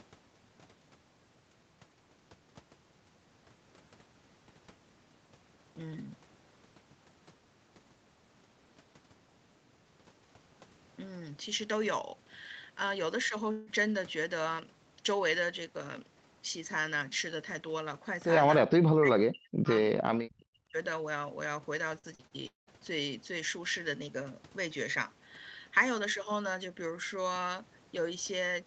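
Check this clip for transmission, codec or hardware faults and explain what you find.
Three kinds of transmission fault are present in this speech, all from the network and echo-control stages; the band limit at 8 kHz fits an Opus call path at around 32 kbps.

From 13.51 to 13.70 s there is a long network dropout, likely caused by a brief loss of incoming audio. About 160 ms never arrived, and nearly all of it is covered by the receiver stretching the last sound into a fading buzz. On a spectrogram this appears as smeared, flat harmonic bands with no silent gap.

From 18.66 to 19.70 s and again from 20.11 to 20.76 s, the speech is suppressed in double talk, likely by an echo canceller that mistook the talker for loudspeaker echo while both sides spoke. The level falls by roughly 40 dB. The waveform collapses sharply, and the spectrogram thins to near-empty patches.

From 21.99 to 22.70 s, repeated packet loss gives a robotic, choppy sound. 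Four gaps arrive in quick succession, the longest 198 ms, and concealment fills about 45% of the span. The spectrogram shows repeated, frozen harmonic blocks broken by abrupt seams.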